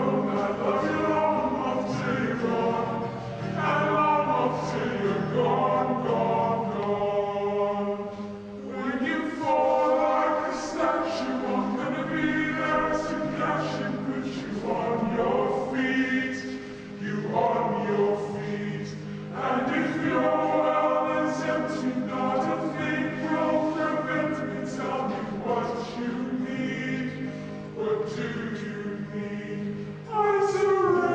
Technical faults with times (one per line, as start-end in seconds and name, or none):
0.00-31.14 wrong sample rate